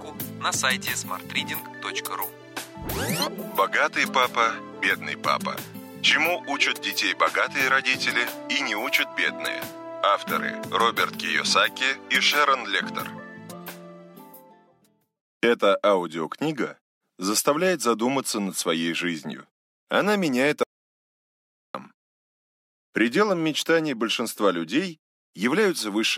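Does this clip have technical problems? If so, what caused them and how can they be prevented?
Yes. A playback stall cuts the sound off abruptly at 20.63 s, and it stays silent until 21.74 s, a gap of about 1.1 s, before continuing. The likely cause is that the player's buffer ran dry or its audio thread was held up, so it had nothing to send to the output. On a waveform this appears as a flat line with hard edges at both ends, and on a spectrogram as a clean vertical band of empty energy across all frequencies. Keeping a deeper playback buffer and running the audio thread at high priority, free of blocking calls, would prevent it.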